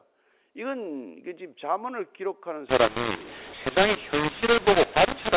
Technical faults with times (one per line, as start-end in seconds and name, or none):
2.69-5.36 mu-law and A-law mixed up